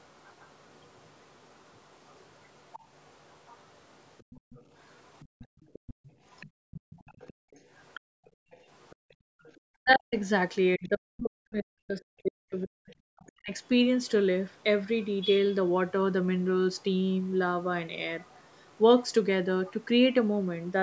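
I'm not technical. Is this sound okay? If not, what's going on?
No. From the start to 9.6 s, again from 13.3 to 14.6 s, and from 16.8 to 19.7 s, a faint second voice sits underneath. This is likely the other side's voice leaking through from the loudspeaker. It's a separate voice, not a drop in level.

From 5.3 to 9.5 s, the room sound briefly falls away and comes back, adding up to about a second and a half. This is background gated by the echo canceller.

From 9.8 to 13.5 s, the talker's own voice dips. This is likely speech suppressed in double talk. Unlike the gating, here the voice itself is pushed down while both sides talk.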